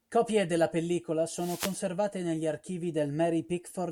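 A wireless microphone noise hit in this speech, 1.34 to 1.80 s, between "della pellicola" and "negli archivi": radio reflections cancel, and receiver static swishes over the voice.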